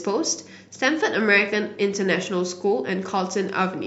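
No technical faults can be heard anywhere in this speech recording. Nothing in the signal path draws attention at any point in the clip.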